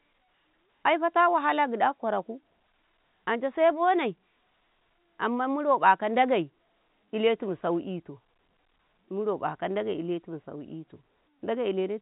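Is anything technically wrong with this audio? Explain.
No, nothing is technically wrong.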